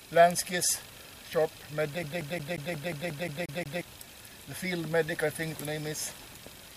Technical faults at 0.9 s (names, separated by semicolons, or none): none